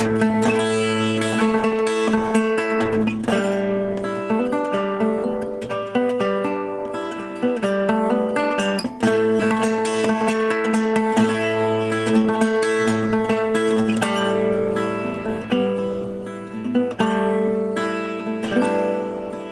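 At 9.39 to 9.41 s the audio makes a skip ahead: about 0.7 s of sound is lost, most likely discarded while later packets were already queued. Nothing fills the gap. The material on either side is butted together, so the sound jumps abruptly forward.

From 9.51 to 10.41 s a jitter buffer speed-up follows, as the receiver works off the excess it had built up. Short pitch-period segments are cut repeatedly, removing about 70 ms in total. Playback runs at 107% with unchanged pitch and sounds slightly rushed.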